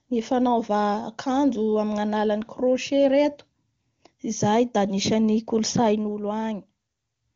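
The speech comes through the AMR wideband (HD Voice) codec at what sounds like its highest rate, with nothing heard above about 7.5 kHz and no audible technical faults.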